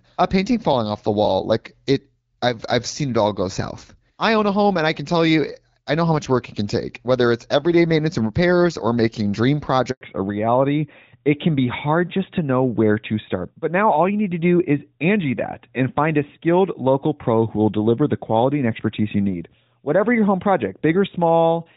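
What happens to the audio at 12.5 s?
By 12.5 s the sound has undergone a fallback to narrowband, which began at 10.01 s and lasts to the end. The call drops from wideband AMR to narrowband AMR, so nothing above 4 kHz survives. Unlike a gradual filter roll-off, the dullness arrives as one abrupt step and adds codec roughness.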